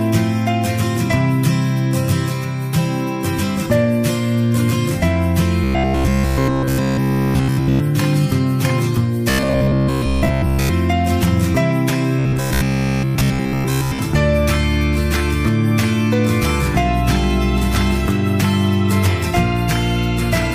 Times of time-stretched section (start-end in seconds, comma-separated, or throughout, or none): none